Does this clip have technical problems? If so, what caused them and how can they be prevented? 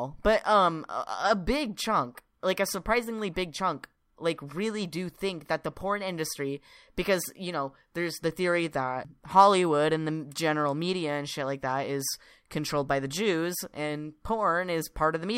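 No, there are no technical problems to report here.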